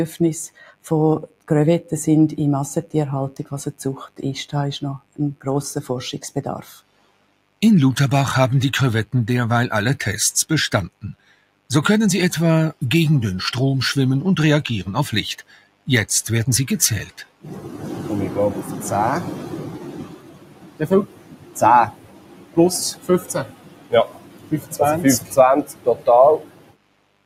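A mains buzz at 50 Hz runs through the whole recording, sitting roughly 25 dB below the wanted signal. Sharp switching spikes from a dimmer, a rectifier or an unshielded connection get into the signal path twice per mains cycle, at 100 spikes a second. That puts a dense series of 50 Hz harmonics reaching up to several kHz into the recording. It comes across as a constant, buzzing hum under everything.

Also present throughout is a noise suppressor applied to sounds it was not designed for. A suppressor tuned for speech was left active on this material and treats sustained tones, ambience and reverberation as noise to be removed. Its gain swings by around 15 dB. Transients pass while anything held or decaying is pulled down, so the level pumps and the sound thins out.

Seven passages show sound cut by the noise suppressor, at 0.48 to 1.91 s, 4.99 to 5.46 s, 6.26 to 7.61 s, 10.89 to 11.7 s, 15.4 to 15.88 s, 17.07 to 17.46 s, and from 19.78 s to the end. 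In the first six the deepest drop is about 17 dB, and in the last it reaches about 18 dB. The final stretch is the longest, with around five seconds affected. In each passage the suppressor judged steady or fading material to be noise, so sustains sink and tails are cut short while sudden onsets still come through.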